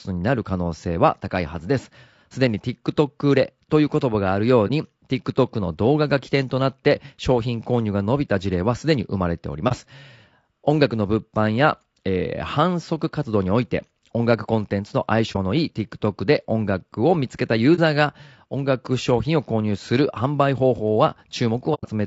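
Speech, likely passed through low-delay AAC compression at a low rate, something like 32 kbps AAC-ELD, leaving the voice rough and grainy with noise between harmonics. AAC frame loss with muting, where the decoder zeroes lost frames, causes soft-edged dropouts at 4.67, 9.68, 15.32 and 17.75 s, and a longer one from 21.74 to 21.86 s.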